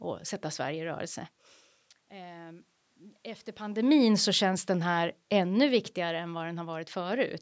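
From 3.72 to 6.22 s, automatic gain falling pulls speech and room background down together by about 4 dB, tapering the waveform envelope and evenly dimming the spectrogram.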